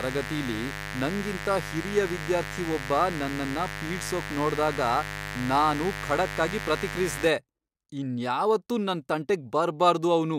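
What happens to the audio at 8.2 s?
Nothing goes wrong at 8.2 s: the speech there plays through intact, with no dropout, click, distortion or other audible fault.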